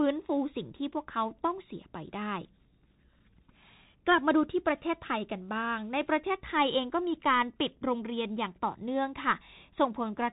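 Bluetooth CVSD headset codec damage runs through the whole speech clip. Each sample is a single up-or-down bit with an adapting step, which fits a 64 kbps link. The top is cut near 3.8 kHz, s sounds turn scratchy, and granular hiss sits underneath.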